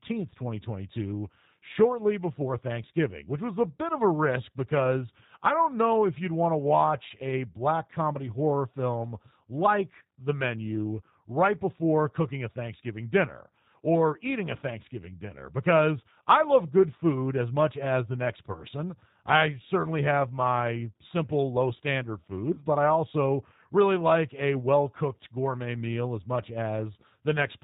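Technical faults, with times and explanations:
Throughout, G.729 codec: the speech sounds band-limited with nothing above 4 kHz, and noticeably rough and synthetic, which fits an 8 kbit/s G.729A coder rebuilding it from a filter, pitch predictor and sparse pulses.
18.52–18.63 s and 22.54–22.64 s, VoIP packet loss concealed by the speech codec: each gap, consistent with about 30 ms of lost audio, is bridged by a fading extrapolation, and the speech stays weak for tens of milliseconds or more while the decoder recovers.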